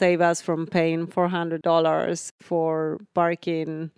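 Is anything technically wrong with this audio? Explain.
No, nothing stood out as technically wrong on listening to this speech recording.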